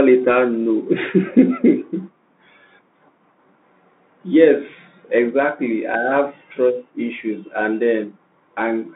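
From start to finish the speech is squeezed through a Bluetooth CVSD headset codec. The band runs only from about 200 Hz to 3.6 kHz, so it sounds boxy and phone-like. Every sample is a single up-or-down bit with an adapting step, which fits a 64 kbit/s CVSD link. Sharp, loud high content outruns that step and smears, s sounds come out scratchy, and a grainy hiss sits under the speech the whole way through.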